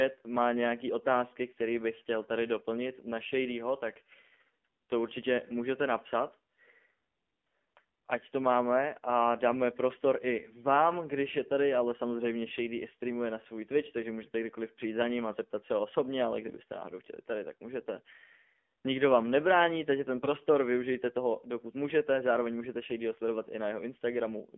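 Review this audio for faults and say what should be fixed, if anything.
The whole recording sounds buzzy, thin and plainly synthetic, with nothing above 4 kHz and a narrow 200 Hz to 3.4 kHz band. That is the AMR narrowband mobile codec (AMR-NB) at work. It samples at 8 kHz and rebuilds the speech from a vocal-tract model driven by a few pulses per 5 ms subframe, and the synthetic quality fits a low rate around 7.4 kbps. The call's microphone high-pass only trims the deepest bass. To prevent this, carry the call over a wideband codec such as AMR-WB or EVS, or at a higher AMR mode.

From 20.22 to 20.29 s, between "vám nebrání takže ten" and "využijte toho dokud můžete", the speech briefly turns hoarse, scratchy and gargly while keeping roughly its pitch and level. These are AMR bit errors. Bits in the less protected part of the frames arrived flipped while the checksum on the key bits still passed, so the excitation pulses landed wrongly and the fine gain and spectrum values went off. 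The length fits about three 20 ms frames, with an error rate of a few percent. To prevent this, improve the radio link or add stronger channel protection so damaged frames are caught and concealed.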